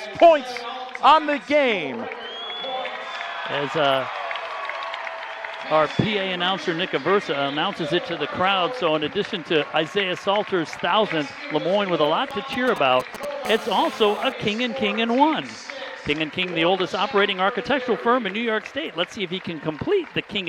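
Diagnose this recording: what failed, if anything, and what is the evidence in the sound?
Between 12.31 and 13.25 s there are GSM signalling bursts: a galloping dit-dit-dit of brief 217 Hz buzzes, roughly 10 dB under the signal. The analogue circuitry is rectifying RF from a nearby 2G handset that is only sending short signalling bursts.

Right after, from 13.45 to 14.32 s, comes steady GSM phone buzz, a hard, raspy 217 Hz tone with lots of harmonics, about 16 dB below the signal. That's the same analogue pickup, but now the phone is in a call and transmitting in bursts 217 times a second, so the rectified pulses form a constant buzz.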